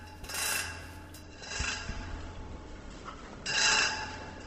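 An everyday-sound recording that switches abruptly to an adaptive stream at a lower bitrate at 1.23 s and stays there to the end at 4.47 s. From that point nothing is present above 8.1 kHz, so the top end sounds dull, and coding artefacts become more audible. The change is instant with no gap, which fits a stream falling back from an Opus rendition around 64 kbit/s to one around 16 kbit/s as the connection slowed.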